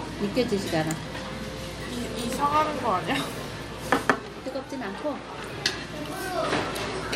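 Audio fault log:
No faults heard.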